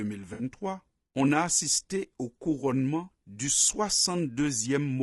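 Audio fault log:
Throughout: low-delay AAC compression. The speech sounds plainly rough and grainy, with noise between harmonics, as expected from AAC-ELD at a low bitrate, likely at around 32 kbps.
0.33 to 0.43 s: AAC frame loss with concealment. About 60 ms of sound, consistent with three lost frames, is filled from the previous spectrum, giving a brief smeared, noisy patch.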